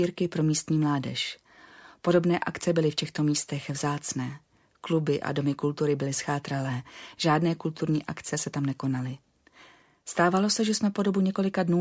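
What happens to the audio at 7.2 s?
Nothing goes wrong at 7.2 s; the audio plays through that moment intact, with no dropout, click or distortion.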